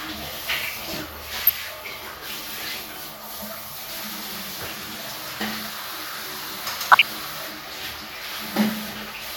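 DAB burbling from 6.81 to 7.04 s: bit errors of a fraction of a percent slip past error correction, putting short blips of noise in single sub-bands.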